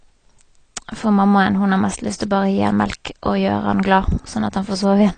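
From the start, the speech sounds dull and smeared, with a fizzy warble on sibilants and clearly audible codec damage. Nothing appears above 9 kHz on a spectrogram, a flat ceiling with patchy holes below it. The likely cause is AAC compression, consistent with AAC-LC at a low bitrate near 32 kbps.

From 2.16 to 2.20 s, a pre-echo appears: a short hiss lasting about 41 ms before a sharp attack. The codec spread its block's quantisation noise into the quiet moment ahead of the onset. The waveform shows low-level noise creeping in before the transient, and the spectrogram shows a broadband smear preceding it.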